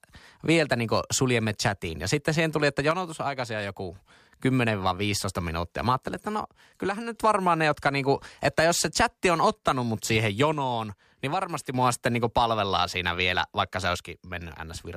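One channel likely drops out of the stereo pair four times, halving the shared signal in the mono sum, so the speech dips abruptly by about 6 dB: 2.91–3.96 s after "sitten siihen tuli että", 6.08–7.15 s before "varmaan ne jotka niinku", 10.53–11.74 s, and 13.96 s to the end after "siinä vielä vaikka se".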